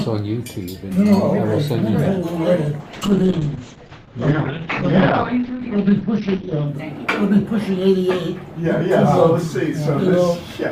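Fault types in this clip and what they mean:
call bitrate drop: from 2.81 to 6.73 s the encoder gets far fewer bits, so sound turns coarse and watery, highs cut at 6 kHz, continuous rather than gapped like packet loss.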